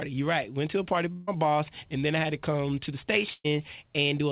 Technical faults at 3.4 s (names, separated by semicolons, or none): burst of packet loss